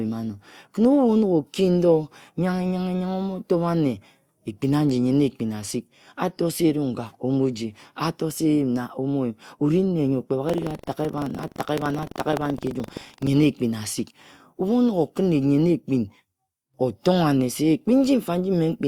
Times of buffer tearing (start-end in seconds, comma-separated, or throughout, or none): 10.45-13.30